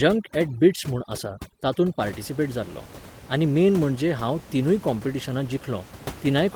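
Overdone noise removal affects this speech clip from 0.0 to 2.0 s. An over-aggressive noise reducer cuts frequency bands that sit near its noise estimate, so the room noise, about 17 dB below the speech, turns to near-silence with twinkling specks. Quieter parts of the voice are cut too.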